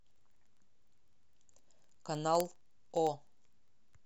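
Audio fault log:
0.11–4.04 s: word clock ticks, roughly every 0.05 s, about seventy in all. An unlocked receiving clock slips one sample each time, leaving sharp, steady ticks.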